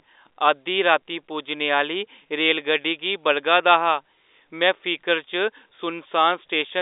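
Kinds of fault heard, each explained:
No faults found; the speech occupies a normal telephone band of about 300 Hz to 3.7 kHz with nothing above 3.8 kHz, as expected of G.711 A-law coding.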